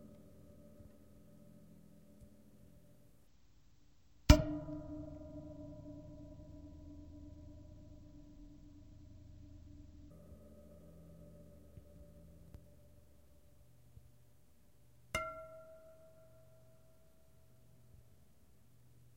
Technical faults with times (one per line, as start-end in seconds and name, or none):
3.27-10.11 stereo read as mono